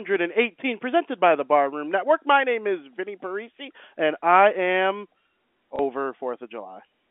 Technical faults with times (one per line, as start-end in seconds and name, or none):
5.76-5.79 packet loss with last packet repeated